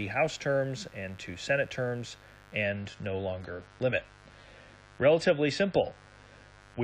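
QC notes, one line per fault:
throughout: mains buzz, a raspy 50 Hz buzz roughly 25 dB below the speech. Its switching spikes carry harmonics far up the spectrum, unlike a smooth low hum.
2.63–6.83 s: adaptive stream at a lower bitrate. The speech abruptly loses treble above 11.4 kHz and sounds smeared, which fits a drop from 96 to 32 kbit/s AAC-LC. There is no gap, unlike a dropout.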